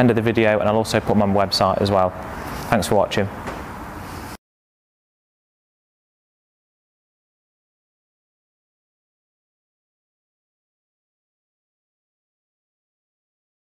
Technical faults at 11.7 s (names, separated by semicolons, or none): none